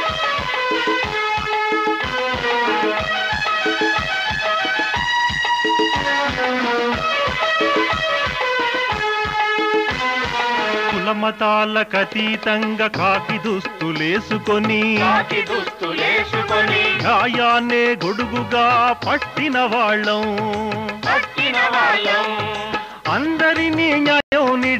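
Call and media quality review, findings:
Bluetooth stall, 24.20–24.32 s. Probable component: wireless headphone link, likely radio interference delaying packets until the headphones' playback buffer emptied. Symptom: sound drops to silence for about 116 ms near the end of the clip, then resumes once the delayed packets are re-sent and arrive.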